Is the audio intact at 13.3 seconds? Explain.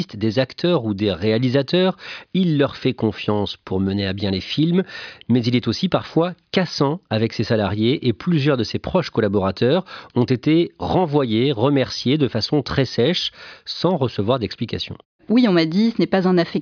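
Yes, the speech at 13.3 seconds comes through intact, with no dropout, click, distortion or other fault at that point.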